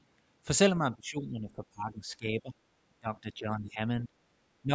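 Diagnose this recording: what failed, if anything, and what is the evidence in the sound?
Call processing failed: the echo canceller likely mistook this talker for loudspeaker echo, so speech was suppressed in double talk. The speech sinks by up to about 20 dB across 0.79–2.55 s and 3.0–3.8 s, with brief cuts at 4.07–4.11 s and 4.62–4.72 s.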